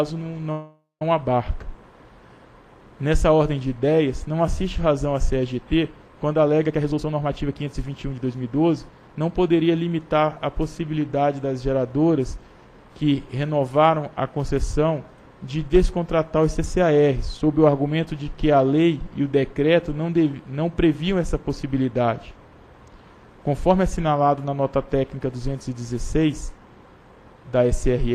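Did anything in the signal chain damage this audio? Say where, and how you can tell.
Yes. At the network and receive buffer, a call audio freeze runs from 0.51 to 1.02 s. Packets were likely held up and the buffer ran dry. The last sound is stretched into a fading buzz or hiss that ends in about 160 ms of silence. Playback then resumes where it stopped, so nothing is lost but a half-second gap is inserted.

In the same receive buffer, a jitter buffer speed-up runs from 6.67 to 9.16 s. With too much audio queued, the receiver cut short pitch-period pieces over and over, about half a second in all. The sound plays roughly 120% fast at unchanged pitch and comes across as hurried.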